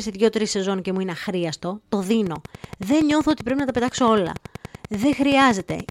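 Speech, with a train of clicks from 2.26 s to the end at 5.90 s. About forty sharp, similar ticks arrive at a regular 10.5 per second, peaking roughly 5 dB above the speech. They continue through pauses. Likely cause: interference from nearby equipment or a faulty connection or power supply.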